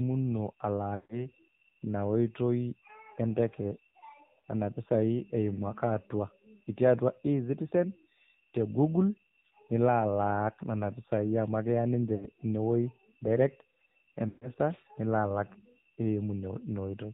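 AMR narrowband mobile codec throughout: the speech is cut off above 4 kHz and sounds buzzy and synthetic, which fits a low AMR-NB rate near 7.4 kbps.

Lost AMR speech frames at 0.96–1.25 s, 4.40–4.43 s, 12.16–12.28 s and 14.28–14.51 s, the last just before "nilo alak". Corrupted frames were replaced by fading repeats of the last good pitch and vocal tract settings. The longer gaps smear the sound and fade it toward silence, and the briefer ones cause short warbling dips.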